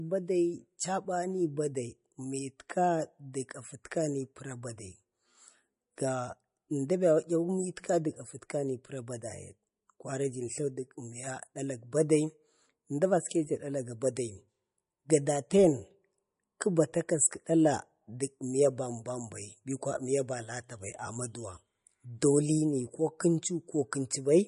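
From start to finish the speech carries plainly audible codec damage, likely from MP3 compression. Nothing is present above 10.6 kHz, so the top of the sibilants is cut off flat, which points to an encoder starved of bits, consistent with a bitrate around 40 kbps. The weak frequency lines that survive flicker in and out from frame to frame, giving the speech a watery, swirling texture, and consonant onsets sound smeared rather than crisp.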